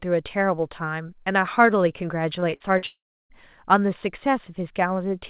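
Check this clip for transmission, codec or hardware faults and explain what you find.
Two network faults sit back to back in the middle of this speech clip.

From 2.4 to 2.84 s there is repeated packet loss with a robotic sound. Four gaps occurred, the longest 40 ms, and each was patched by extending the previous sound. About 120 ms, or 27% of that span, is concealed, so the speech turns choppy.

From 2.86 to 3.31 s comes a long network dropout, likely a stall in which no packets arrived. The last sound is stretched into a fading buzz, then roughly 330 ms of silence follows before the speech resumes with that stretch missing. The G.711 mu-law call path carries nothing above 4 kHz throughout.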